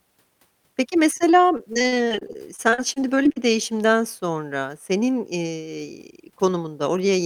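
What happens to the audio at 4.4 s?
Nothing goes wrong at 4.4 s: the speech there plays through intact, with no dropout, click or other fault at that moment.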